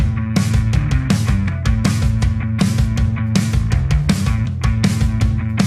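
No technical faults are audible.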